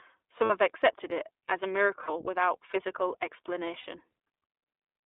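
Speech coded with the iLBC codec sounds narrow and slightly rough and synthetic throughout. On a spectrogram, energy sits between 300 Hz and 3.6 kHz with nothing above, and the roughness fits frame-by-frame excitation coding at a rate that points to 15.2 kbps. Lost iLBC frames interrupt it at 0.44–0.51 s (just before "have accepted it as"), 2.02–2.10 s (between "accepted it as a" and "without physical") and 3.80–3.86 s. Each gap of about 60 ms, consistent with three 20 ms frames, becomes a held, buzzy vowel as the decoder repeats the last pitch cycle mixed with noise. The waveform shows repeating periodic cycles, and the spectrogram shows flat, frozen harmonic stripes before the speech snaps back cleanly.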